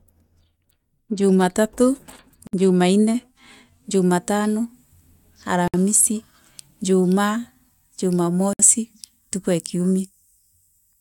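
Speech with a gap at a join of encoded pieces at 2.47–2.53 s, 5.68–5.74 s and 8.53–8.59 s. Each gap lasts about 60 ms, from untrimmed encoder delay and end padding. Unlike a dropout, nothing is lost: the sound resumes exactly where it stopped.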